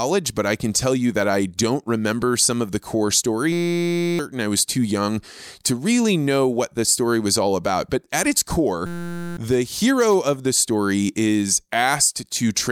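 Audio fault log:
3.52–4.19 s, system hang loop: after "some of the core" the system stalled while the audio hardware kept replaying one 5.8 ms buffer (consistent with 256 samples), so the speech gives way to a steady 172 Hz buzz until "I was too young". About 0.7 s of audio is lost.
8.86–9.37 s, system hang loop: the same stall recurs after "at its". The identical 5.8 ms buffer repeats, giving the same 172 Hz buzz before "the hero of the" resumes. About half a second of speech is missing.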